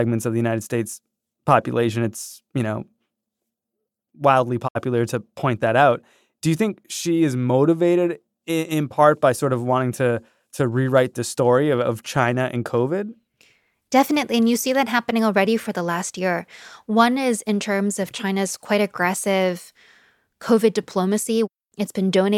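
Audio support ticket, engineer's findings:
Digital broadcast dropout, 4.67 to 4.77 s, just before "to point that out". Speech fades out over about 20 ms into a roughly 64 ms silent hole, consistent with two lost frames. Probable component: receiver/decoder muting on failed checksum. Differs from buffer underrun: no repeated or stretched audio, no click, nothing delayed. Programme resumes on time with the gap's content simply gone.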